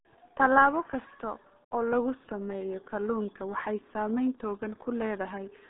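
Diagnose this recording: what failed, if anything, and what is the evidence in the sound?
The codec stage failed: the speech has passed through the RealAudio 14.4 codec for the whole clip. The band runs from about 200 Hz to 3.7 kHz, with nothing at all above 3.8 kHz. The sound is muffled and gargly in a way that fits a low-rate codec of about 8 kbit/s built for dial-up modems. It models the speech coarsely and rebuilds it, which causes heavy damage. A simple telephone-band filter would also be narrow, but it would stay clean, without this gargle.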